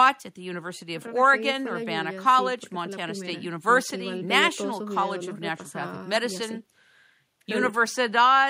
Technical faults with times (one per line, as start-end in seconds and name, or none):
none